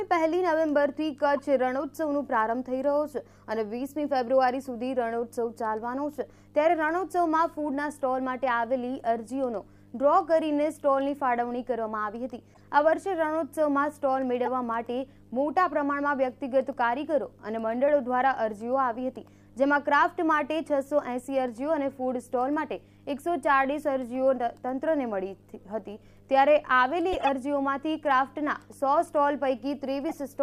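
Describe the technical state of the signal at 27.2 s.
A run of corrupt frames was decoded from 27.12 to 27.29 s: flipped bits in the compressed data were played back as if valid, so misread gains and codes put energy at the wrong frequencies, peaking around -10 dBFS. The span fits roughly five damaged frames, heard as chirps, blips or noise bursts.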